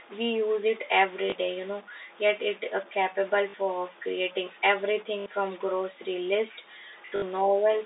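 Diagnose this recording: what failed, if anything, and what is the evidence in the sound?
Converter stage: grainy noise or distortion runs throughout, likely a stuck bit. On a spectrogram, pauses show a broadband noise floor instead of silence, and the waveform shows offset steps.

Network stage: packet loss with last packet repeated causes a small blip at 1.3 s (20 ms) and robotic stutters at 3.5 s (40 ms), 5.2 s (60 ms), and 7.06–7.22 s (100 ms scattered). The waveform shows identical repeated blocks consistent with 20 ms packets, with a 50 Hz buzz on the spectrogram.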